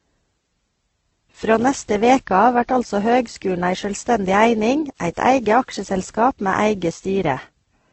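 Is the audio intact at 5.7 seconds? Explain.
No, at 5.7 seconds, as throughout, the speech was likely transcoded between lossy codecs, a very low-bitrate Opus-like encode then WMA, leaving stacked smeary artefacts and nothing above 8.2 kHz.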